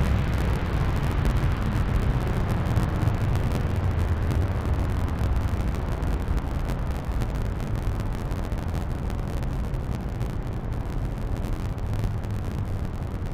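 Interleaved audio read as planar runs throughout this recording of sounds. Short blocks of about 11.61 ms, which fits a 512-sample block, split the channels wrongly, leaving it dull, robotic and buzzing at 86.1 Hz.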